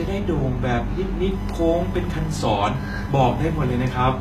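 Computer activity noise runs throughout this speech clip: a buzzing pulse train near 1 kHz, roughly 25 dB below the voice, rising and falling with processor or graphics load through the shared audio ground rather than with the speech. Also throughout, the treble sounds gritty and metallic, with nothing above 14.9 kHz, most likely from HE-AAC compression at a bitrate near 20 kbps, where the upper bands are rebuilt from copied lower harmonics that misalign.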